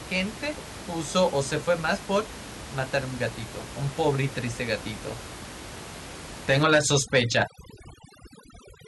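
Speech recorded over room noise sitting about 14 dB below the voice shows overdone noise removal from 6.63 s to the end of the clip. A noise reducer pushed too hard cuts each frequency band that drops near its noise estimate, so the background collapses into near silence with twinkling specks, and quieter parts of the voice vanish too. On a spectrogram, the grey noise floor gives way to black, dotted with isolated bright blips, and speech harmonics look ragged and gappy. The waveform shows flat, almost empty stretches between words.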